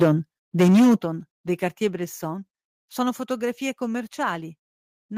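Speech, with harsh, crackling distortion from 0.01 to 0.12 s and 0.59 to 0.95 s. That is microphone overload, likely from input gain set too high. Peaks run about 8 and 9 dB past the limit and get flattened. Voice and background then drop suddenly at 0.03 s by about 2 dB and at 1.02 s by about 8 dB. This microphone volume stepped down is likely the call software cutting input gain after the overloaded peaks.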